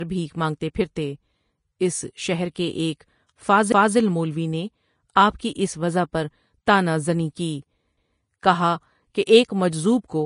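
Heavy lossy encoding, likely Vorbis at a rate that fits roughly 31 kbps, leaves this speech clip plainly hissy and grainy throughout, with nothing above 10.5 kHz and roughened, blurred detail. Pre-echo at 2.55 s comes from quantisation noise spreading across a transform block ahead of a sharp onset, so a brief hiss of about 11 ms precedes that attack and softens it. Overlapping chunks, where each roughly 4 s processing segment restarts before the previous one finished, make 250 ms of audio play twice, heard as stutters at 3.72–3.97 s and 7.97–8.22 s.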